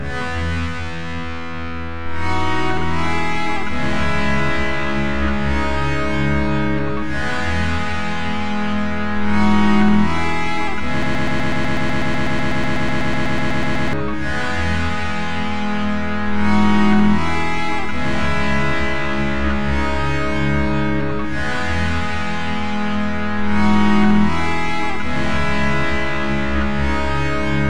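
Most likely the player or stream stalled at 11.03 s and kept resending the last fragment it held, producing a broken-record loop: a 0.12 s piece repeats exactly, back to back, about two dozen times until 13.93 s, and the audio that belonged there is lost.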